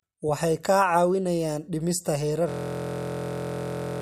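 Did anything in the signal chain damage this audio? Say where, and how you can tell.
Yes. The damage is at the driver or buffer stage: a system hang loop. After "kaa caawinayaan dhimista", at 2.49 s, the speech stops and a 23.22 ms fragment repeats exactly, about 66 times, through to the end of the clip. At a repeat rate of 43.1 Hz, this short cycle is heard as a steady buzz. The host or driver stopped delivering new audio while the hardware kept replaying the same ring buffer. The loop length fits a 1024-sample buffer.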